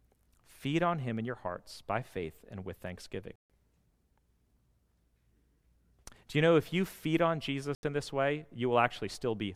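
At 3.36 s the speech drops to silence for 142 ms, and at 7.75 s for 81 ms. After each gap the speech picks up further along, as if it had kept playing. A stall would instead pause and continue from where it stopped. This points to a likely Bluetooth dropout, with lost packets never reaching the headphones.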